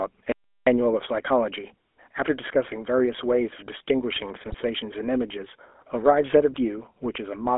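GSM full-rate codec damage runs through the whole speech clip. The voice passes through a narrow line band of about 250 Hz to 3.5 kHz, and the coder rebuilds the vocal tract from a sparse, pulse-driven excitation, which fits a 13 kbps full-rate stream. The result is a plainly audible buzzy, gravelly roughness.

An audio dropout to silence runs from 0.32 to 0.67 s, about 350 ms of silence with no room tone beneath it. The speech cuts off abruptly and resumes mid-flow. The likely cause is a momentary loss of the input while the recorder kept writing silence.

GSM bit errors strike from 4.46 to 4.55 s. That 84 ms stretch fits about four 20 ms frames decoded from corrupted bits. Damaged filter, pitch and gain values distort the spectrum and level, so the voice briefly breaks into a squawking, gargling burst.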